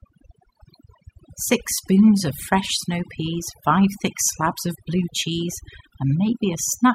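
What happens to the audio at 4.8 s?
At 4.8 s you're hearing overdone noise removal, and it's not local; it runs through the whole clip. The noise reduction was pushed too hard, so any frequency band sitting close to its noise estimate gets pulled way down or shut off, taking the softer bits of the voice along. Between phrases the background drops and breaks up into little twinkling specks.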